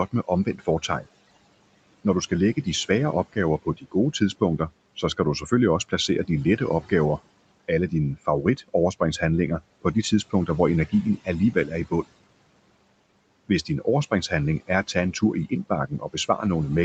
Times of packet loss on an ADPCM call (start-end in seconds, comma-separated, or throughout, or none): none